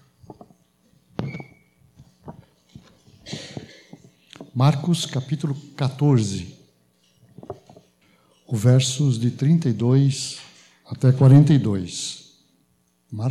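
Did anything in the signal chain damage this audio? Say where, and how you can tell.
No, nothing stood out on listening that would point to damage at any stage of the chain.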